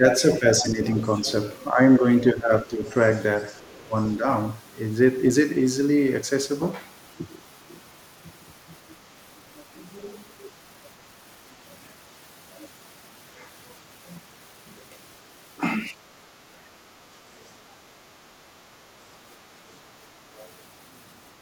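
From 0 to 2.83 s, the main speech dips by up to about 10 dB over roughly a second in total. This is speech suppressed in double talk, likely an echo canceller turning down the talker while the far end is also active.

Overlapping that, from 0.1 to 1.21 s, the other side's voice leaks through at about 10 dB below the speech. A second voice sits under the talker. It is not a reverb tail of the same voice.

It returns much fainter, at about 30 dB down, from 2.87 to 4.15 s. Overlapping the end of that span, from 3.81 to 4.26 s, the speech is suppressed again by up to about 15 dB for about 0.2 s.

A brief leaked scrap follows at 15.80–15.88 s (about 35 dB down). The speech dips again by up to about 15 dB, over roughly 0.3 s in total, between 16.57 and 17.82 s. Another leaked scrap comes at 20.37–20.46 s (about 30 dB down).

Finally, from 21.34 to 21.41 s, the background is gated by the echo canceller. 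The room sound drops about 10 dB for 70 ms and then returns. Here it is the room tone that dips, not the speech.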